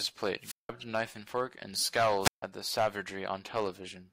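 The wireless microphone's radio signal fades twice, tripping the receiver's squelch: a wireless microphone squelch dropout at 0.40 to 0.70 s mutes the speech for 180 ms, and another at 2.20 to 2.43 s mutes it for 150 ms.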